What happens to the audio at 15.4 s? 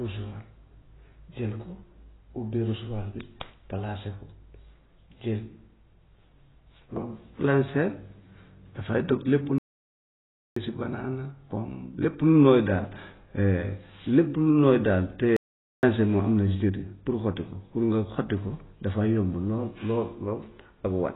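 The speech cuts out abruptly at 15.37 s and stays silent until 15.83 s, a gap of about 0.47 s, before carrying on. This is a playback stall: the output most likely ran dry because the player was starved of data or its processing thread was held up, so nothing reached the output until it caught up and resumed.

Around that gap, as everywhere in the clip, the speech sounds dull and muffled, with a smeared, swirly texture on sustained sounds and a fizzy, thin edge on sibilants. That points to AAC compression under heavy strain, likely AAC-LC at a low bitrate, which fits about 16 kbps. At that rate the encoder lowers its upper cut-off and quantises the remaining frequency bands so coarsely that parts of the spectrum drop out or are filled with substitute noise.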